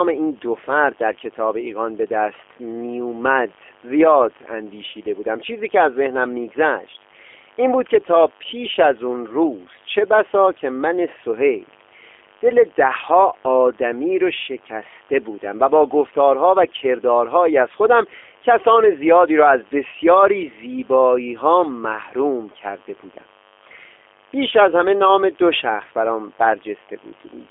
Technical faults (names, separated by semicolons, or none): mains buzz; G.729 codec